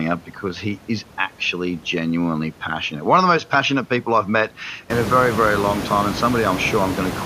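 No technical faults occur in this speech; the room noise rising by about 21 dB around five seconds in is part of the recording itself.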